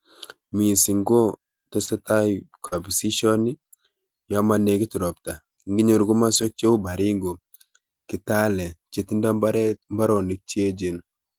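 A speech recording with brief smears around 1.85–1.89 s and 2.67–2.74 s, where short concealed packet loss left the receiver to extend the preceding sound across roughly 20 ms and 40 ms of missing audio. Rougher, noisier patches at 1.87 s, 2.72 s, 6.34–6.48 s and 9.68 s are lost packets rebuilt from error correction, where the decoder played the low-bitrate copies carried in the following packets.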